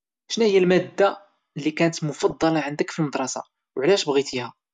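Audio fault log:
2.19–2.43 s, DAB burbling: a short burst of burbling over the speech. Bit errors slipped past the error correction into the MP2 data, so corrupted samples put short noise blips in single sub-bands and corrupted scale factors threw sub-bands up or down in level for up to a frame. The length suggests about ten damaged frames, with an error rate around half a percent.
4.33–4.42 s, DAB burbling: a briefer burble with the same mechanism, pointing to about four corrupted frames at a slightly lower error rate.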